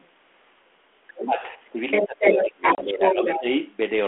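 At the very start, 0.0 to 0.09 s, a faint scrap of a second voice sits far beneath the speech, about 30 dB down: the other side's voice leaking through. The likely cause is an echo canceller that has not fully removed the far end playing from the talker's loudspeaker. It returns much more strongly from 1.17 to 1.48 s, only a few dB below the talker. Unlike crosstalk from another line, it comes and goes with the far side's speech.

Over that same stretch, 1.17 to 1.78 s, the talker's own speech sinks by as much as about 15 dB for around half a second. This is speech suppressed in double talk: with both sides speaking, the canceller likely turns down everything rather than only the echo. A codec dropout would leave a hard-edged gap.

Both faults return together later. The leaked voice runs from 1.91 to 2.43 s, somewhat louder than the talker, and again from 2.63 to 3.40 s at roughly equal level. 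Suppression covers 2.02 to 3.46 s, about a second in total, at times down by around 20 dB.

Inside that span, from 2.75 to 2.83 s, comes packet loss on an ADPCM call. A sharp-edged hole of about 30 ms, which fits a few lost packets, is followed by speech that resumes slightly distorted. The G.726 decoder's predictor and step size have to catch up with the sender, and it settles within tens of milliseconds. That recovery sets it apart from the suppression dips, while the 32 kbit/s telephone band of 250 Hz to 3.4 kHz stays the same throughout.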